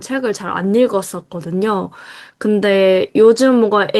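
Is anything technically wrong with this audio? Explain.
No, no technical faults present.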